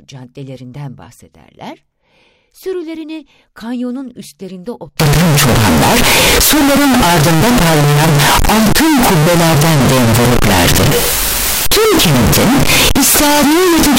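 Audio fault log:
5.00–13.98 s: float read as integer. After "kanyonun üstlerinde", speech becomes a harsh, near-square wave at an almost fixed, high level, likely from 32-bit float samples decoded as integers.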